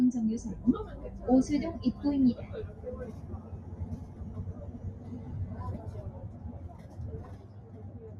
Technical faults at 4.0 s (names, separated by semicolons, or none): noise suppressor applied to music or sounds